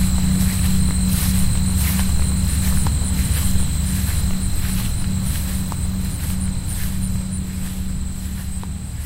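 Nothing is technically wrong with this clip of sounds: no faults can be heard anywhere in it.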